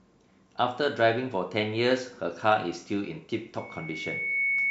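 At 3.58 s loudspeaker feedback squeal begins: a 2.2 kHz tone swells over most of a second to match the speech, unlike a steady whine, until the end.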